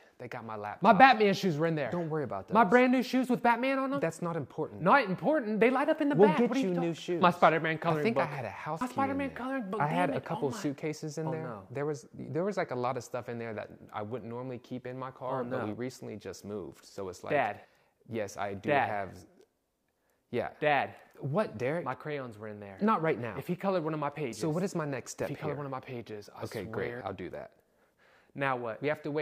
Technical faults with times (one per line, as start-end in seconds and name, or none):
none